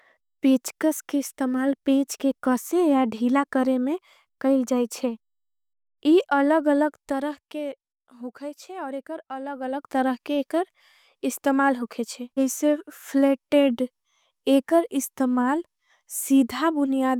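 No technical faults are audible.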